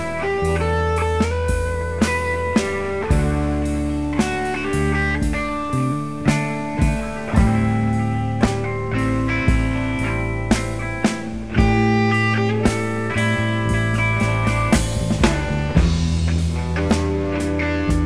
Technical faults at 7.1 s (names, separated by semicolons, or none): none